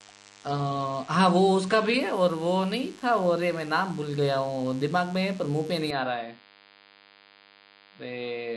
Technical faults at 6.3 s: DECT cordless phone buzz; input switched to a poorer device

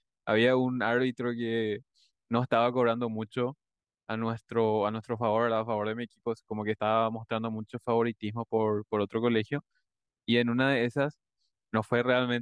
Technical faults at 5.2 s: none

